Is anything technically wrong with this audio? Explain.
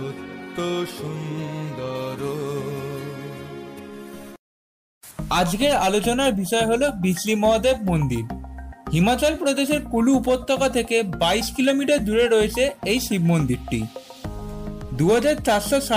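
Yes, there are two faults, and they overlap in time.

From 1.95 to 5.11 s the sound turns thin, bright and hissy at the top, with the sibilant edge pushed forward. This is pre-emphasis left on. The treble lift matches the FM 50 µs curve, about 10 dB stronger at 10 kHz than at 1 kHz. The lift was applied before recording or transmission, and the complementary de-emphasis that should restore the balance was never applied on playback.

At 3.78 s, inside that bright stretch, the audio lurches forward. About 50 ms goes missing, which fits roughly two 24 ms frames. These are compressed frames skipped: the decoder dropped whole frames, either because they were absent or because it rejected them as corrupt.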